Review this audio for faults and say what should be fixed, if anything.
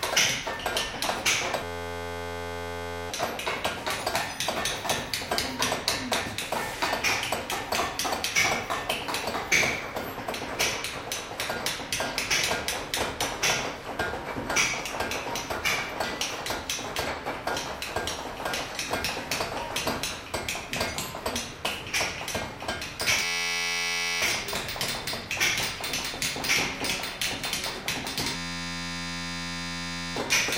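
There's a system hang loop three times, 1.64–3.10 s, 23.24–24.22 s and 28.36–30.16 s, where an 11.61 ms slice repeats into a steady 86.1 Hz buzz, which fits a 512-sample buffer cycling while the machine froze, swallowing roughly 1.5, 1 and 2 seconds of sound. Fix the driver or system stall so the buffer keeps getting fresh audio.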